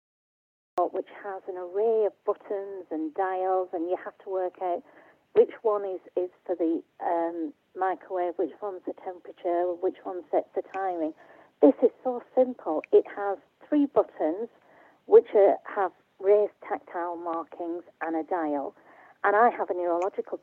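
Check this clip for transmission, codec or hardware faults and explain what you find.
One fault is present: a cut-off start. The clip opens on digital silence from 0.0 to 0.78 s, and at 0.78 s the sound begins abruptly, already in progress, with no natural attack or fade-in. This happens when capture or streaming starts late, so the opening portion of the source is never recorded and the audio joins partway through an ongoing sound rather than at its true onset.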